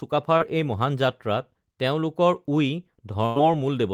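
Speech recorded over a call connection suffers two network faults. The first is a short concealed packet loss at 0.37 to 0.42 s, just before "এই মহান". About 20 ms of audio never reached the decoder in time, and the receiver papered over the hole by extending the preceding sound for roughly 24 ms, leaving a brief smear or wobble as it blends back into real audio. The second is a burst of packet loss at 3.26 to 3.38 s, where about 100 ms went missing in one run. Concealment stretched the last sound across roughly 97 ms while fading it down, producing a held buzz or dying hiss before the speech picks up again further along, with the intervening stretch gone.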